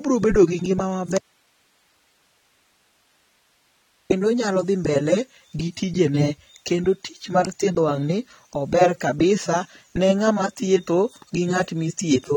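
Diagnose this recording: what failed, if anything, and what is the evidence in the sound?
Right at the start, 0.31 to 0.38 s, there's a phantom power thump just before "gi ngima": a deep low thud that dies away in about 17 ms. That's the analogue wiring stage, where supply voltage switched on a live input and the step kicked through the coupling capacitors.

Then an audio dropout to a faint residue: after "gi ngima" the sound cuts out abruptly at 1.18 s and doesn't return until 4.10 s, just before "onyalo dhi". That's about 2.9 s holding only hiss, about 40 dB down. The cut is hard, not a fade, so the signal was likely lost upstream while the rest of the chain stayed live.

Throughout, the sound is dull and smeared, with a warbly, fizzy edge on sustained sounds and sibilants, and nothing above 18.3 kHz. That points to the codec stage, likely AAC compression run at a low bitrate around 32 kbps, which leaves spectral holes and blurs the detail.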